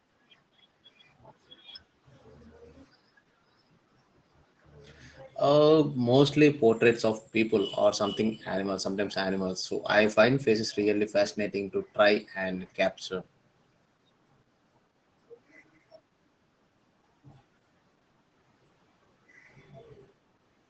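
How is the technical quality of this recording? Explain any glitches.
The recording is clearly degraded by low-bitrate Opus voice compression, audible for the whole clip. The speech sounds muffled and slightly hoarse, with a faintly robotic edge, and nothing is heard above 16 kHz. This is the SILK linear-prediction mode of Opus, which models the voice through a predictive filter and codes the excitation coarsely when bits are scarce. The degree of roughness fits a bitrate around 12 kbps in wideband mode.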